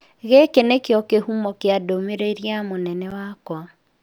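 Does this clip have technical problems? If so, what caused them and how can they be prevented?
Yes. A block of digital silence at 3.11 s, right after "kĩhumo kĩa ndũmĩrĩri ya", cuts the speech out for about 10 ms with no fade, so it is heard as a tick or dip. This points to an output buffer that was not filled in time. Larger buffers and a playback thread with higher priority would help prevent it.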